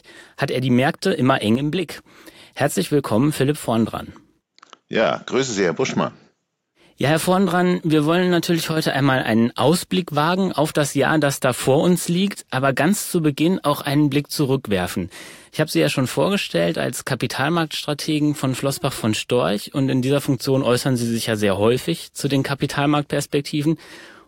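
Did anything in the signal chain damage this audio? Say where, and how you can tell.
Yes: one channel drops out, likely at a loose connector. After "immer eng" (1.55–1.91 s) and "dran wir wollen natürlich" (8.72–8.77 s), the waveform steps down about 6 dB while the spectrogram's spectral shape stays unchanged.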